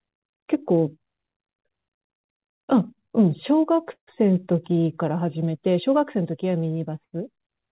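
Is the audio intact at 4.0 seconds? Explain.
No. From 3.92 to 4.10 s there is a call audio freeze, likely a stalled jitter buffer: the last sound is stretched into a fading buzz, then about 90 ms of silence. Unlike packet loss, nothing is cut; the speech resumes where it stopped, about 150 ms late.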